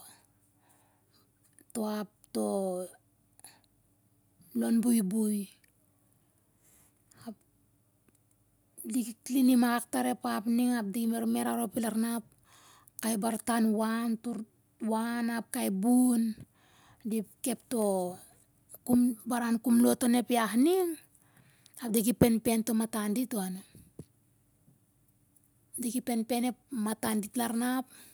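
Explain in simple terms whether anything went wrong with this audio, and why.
Listening to the speech, nothing stood out as having gone wrong.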